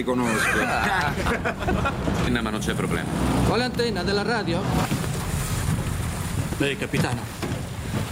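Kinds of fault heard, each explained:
gain pumping: The input gain was likely set far too high, so a fast limiter clamps down on every loud sound and then releases. Throughout the clip the gain swings by roughly 15 dB, leaving the sound squashed.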